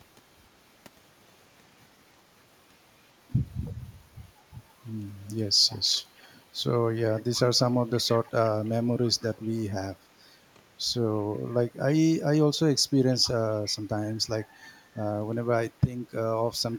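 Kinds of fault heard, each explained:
Echo leak: speech returns 315 ms late, about 25 dB down, likely an echo canceller missing loudspeaker pickup; spectrograms show ghost harmonics trailing phrases.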